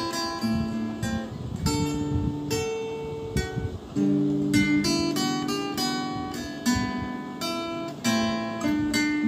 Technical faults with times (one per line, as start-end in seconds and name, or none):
none